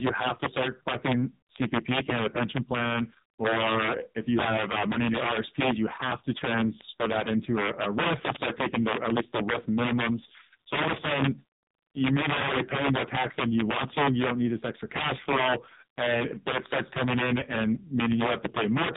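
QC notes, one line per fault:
Throughout, integer overflow. The level is pushed about 9 dB past full scale, and peaks over the limit wrap to the opposite sign. A few percent of samples flip across the whole range. Loud moments break into violent cracks, far harsher than clipping.
Throughout, AMR narrowband mobile codec. The speech passes through a low-rate mobile speech codec, around 5.9 kbps, which fits AMR-NB. Nothing above 3.8 kHz survives. The few pulses per frame leave the voice heavily buzzy, thin and synthetic.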